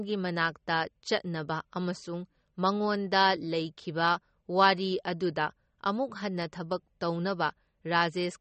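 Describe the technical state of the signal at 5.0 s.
At 5.0 s the speech carries MP3 compression damage, as it does through the whole clip. Nothing is present above 8.3 kHz, so the top end sounds dull. The damage is plainly audible: quiet frequency detail flickers in and out between frames, giving a watery, swirling texture, and s sounds turn metallic. This is likely MP3 encoding at a starved bitrate, which fits roughly 32 kbps. The encoder dropped the treble and discarded weak components to save bits.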